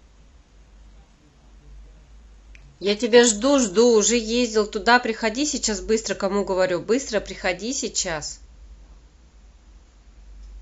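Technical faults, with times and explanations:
0.0–4.0 s, adaptive stream starting at a low bitrate: the player opened on a lean rendition before measuring the connection, so the speech has synthetic-sounding treble and stronger codec artefacts, which fits a roughly 16 kbit/s HE-AAC stream. At 4.0 s quality jumps abruptly, without a gap, suggesting a switch to AAC-LC near 96 kbit/s.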